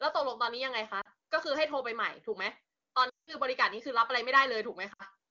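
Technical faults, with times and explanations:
1.01 s (40 ms), 3.09 to 3.37 s and 4.93 s (60 ms): lost AMR speech frames. The decoder keeps repeating the last good pitch and vocal tract settings at falling gain, so the sound drops to near silence within two frames, and the voice comes back weak or rough for a moment.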